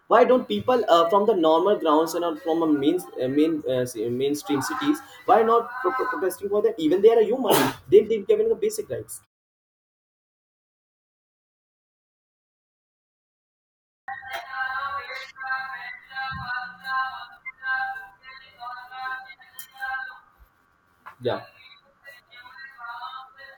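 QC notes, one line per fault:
13.59–14.08 s, clipped start after a pause: after roughly four and a half seconds of silence, the first half-second of speech gets swallowed, so the phrase jumps in abruptly, missing its opening sounds. The output device dozed off during the gap and needed that long to wake back up.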